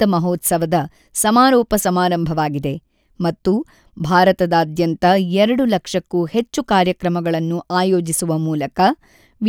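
No technical faults occur at any point in the speech.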